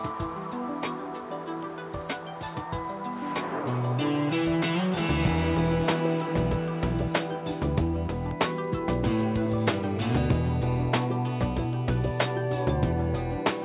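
No fault can be heard anywhere in the signal, which has passed through a WebRTC call path whose band stops at 4 kHz, consistent with G.711 mu-law coding at 64 kbps.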